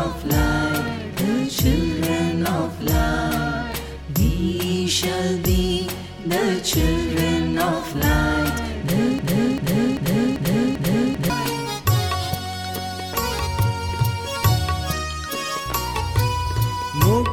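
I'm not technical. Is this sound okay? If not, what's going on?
No. A broken-record loop runs from 9.19 to 11.30 s: a short piece about 0.39 s long plays five times back to back. The playback likely stalled and kept repeating its last fragment, so the sound meant for those seconds is missing.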